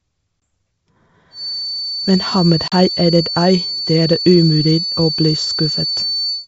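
At 0.41 s the speech drops into a hard-edged gap of about 20 ms, a single lost packet on the ADPCM call filled with silence. Because ADPCM decoding depends on a running predictor and step size, the receiver's state no longer matches the sender's when audio resumes, so the speech comes back slightly distorted before settling within a few tens of milliseconds.

From 1.30 s to the end of the clip a thin whistle at 4.5 kHz sits behind the speech, roughly 10 dB below it and swelling and fading slowly in level. This is a feedback whistle, likely from a loudspeaker-to-microphone loop held just at the edge of feedback. The loop sustains one frequency without running away, so the tone stays at one pitch rather than building into a howl.

At 2.68 s a second packet loss on the ADPCM call leaves a silent hole of about 40 ms, consistent with two consecutive packets missing. The same decoder mismatch follows: on recovery the speech returns slightly distorted, settling over the next few tens of milliseconds. 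Throughout, the G.722 wideband coding carries speech up to about 7 kHz with at most a faint upper-band hiss.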